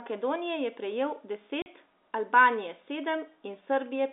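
At 1.62 s, just after "je prejel", the speech drops out for 40 ms, then resumes at 1.66 s. This is packet loss filled with silence: audio packets never arrived and the receiver inserted silence, and the gap's length fits two 20 ms packets. The cut and restart are abrupt. On the waveform it shows as a flat line with vertical edges; on a spectrogram, a blank vertical stripe across the narrow telephone band.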